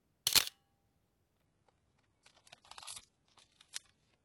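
An everyday-sound recording with an adaptive stream at a lower bitrate. At 1.46 s the quality drops suddenly, with no gap, and stays down to the end. Treble vanishes above 11.5 kHz and codec artefacts rise. That fits a switch to a very low-bitrate HE-AAC stream.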